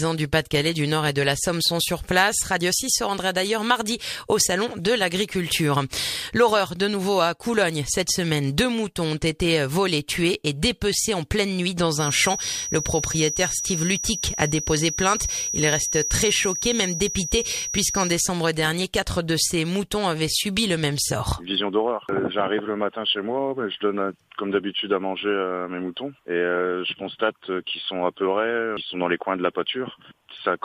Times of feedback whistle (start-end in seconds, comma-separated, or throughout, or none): 11.90-18.21